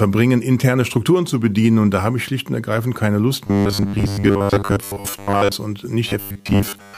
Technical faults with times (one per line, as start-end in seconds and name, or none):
3.47-5.52 robotic sound from repeated short buffers
6.09-6.98 robotic sound from repeated short buffers